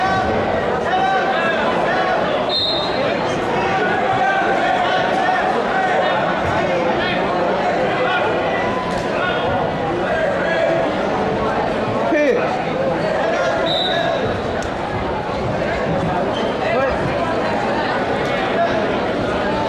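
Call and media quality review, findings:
No audible faults detected.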